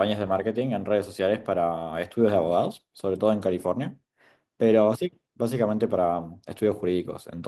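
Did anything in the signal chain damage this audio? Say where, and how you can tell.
No, no damage is audible.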